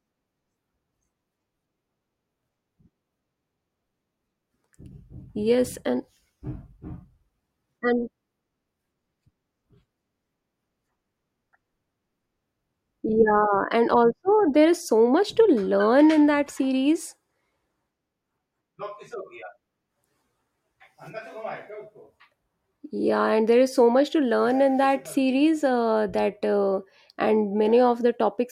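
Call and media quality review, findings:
No technical faults found in the speech signal; levels, continuity and timing stay stable across the whole recording.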